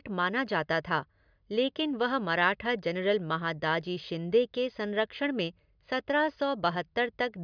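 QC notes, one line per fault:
No technical faults can be heard in the speech signal across the whole clip.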